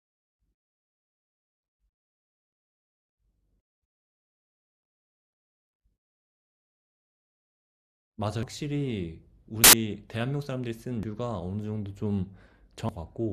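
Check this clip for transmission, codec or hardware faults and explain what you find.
The speech has one codec fault, compressed frames skipped, heard four times. The gaps fall at 8.43 to 8.52 s, 9.55 to 9.73 s, 11.03 s and 12.89 s. Whole compressed frames never reach the output, either lost from the file or rejected by the decoder as damaged. The speech leaps forward by roughly a fifth, half, a fifth and three tenths of a second.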